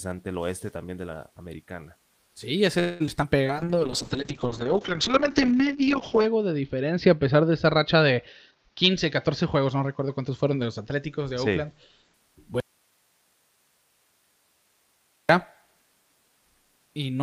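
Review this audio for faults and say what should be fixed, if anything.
Call audio freeze, 2.79 to 3.02 s: the sound stalls for about 0.21 s. The receiver carries the last sound on and lets it die away, then resumes exactly where it stopped. Nothing is lost, but a gap is inserted and the call falls about 0.21 s further behind. The likely cause is packets held up in transit, which left the jitter buffer with nothing to play. A more stable network path, or a jitter buffer with enough headroom for such stalls, would prevent it.

Short concealed packet loss, 3.06 to 3.09 s and 3.23 to 3.26 s: brief smears replace audio that never reached the decoder in time, about 20 ms at the first point and about 40 ms at the second. The receiver extended the preceding sound, tonal parts from their pitch and noisy parts as shaped noise, then blended back into real audio. The second repair also trims the delay by a few hundredths of a second. 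Forward error correction or redundant packets would let the receiver rebuild such short losses.

Jitter buffer slow-down, 3.37 to 3.65 s: the audio drags at about 86% speed while the pitch holds, adding 48 ms in total. The receiver refilled its reserve by repeating single pitch periods and scraps of pauses many times in a row, so sounds stretch out unnaturally. Fewer sudden changes in the buffer's target delay, backed by steadier packet arrival, would remove the need for this stretching.

Call bitrate drop, 3.43 to 12.20 s: the encoder rate falls from 32 to 7 kbps and stays at its lowest for about 2.8 s. Coarser Opus coding roughens the sound, and the bandwidth shrinks from 20 kHz to 8 kHz, which muffles the top end. Quality returns by 12.20 s as the bitrate climbs back. The cause is a falling bandwidth estimate. Better link capacity, or less aggressive rate control, would keep the encoder from starving.

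Jitter buffer speed-up, 8.46 to 8.92 s at about 119% speed, and 9.43 to 10.91 s at about 107%: both stretches sound hurried while the pitch is unchanged. In each, roughly 0.1 s is cut out in many short pieces of one or a few pitch periods. The receiver does this to shed excess delay after the buffer overfilled. Smoother packet delivery, with a buffer target that swings less, would prevent these compressions.

Audio dropout to a faint residue, 12.60 to 15.29 s: the signal cuts out abruptly for about 2.69 s and then returns mid-flow. During the gap only hiss remains, at about 40 dB below the normal signal. The path after the break stayed live while the wanted signal was gone, likely from a lost connection or input upstream. Checking the source link and its connections, and monitoring for signal loss, would catch this.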